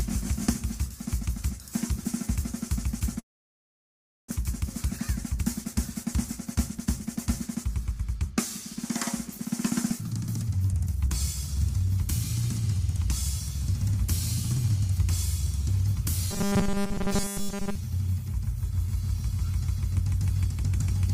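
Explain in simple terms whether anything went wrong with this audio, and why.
Yes, a few things went wrong.

From 3.19 to 4.32 s the sound stops and leaves mostly silence. This is a long network dropout, likely from a stalled connection. About 0.6 s of audio never arrives, and the sound resumes later with that part missing.

Next comes a jitter buffer speed-up, from 5.25 to 8.31 s, 9.31 to 11.07 s and 11.52 to 11.88 s. Audio had piled up. The player cut tiny slices to catch up, so the sound runs about 8% faster at the same pitch.

From 16.31 to 17.76 s the sound turns into a stiff, metallic buzz near 200 Hz. This is robotic sound from repeated short buffers. Fresh audio likely arrived too slowly, so tiny 5 ms pieces were replayed over much of that stretch.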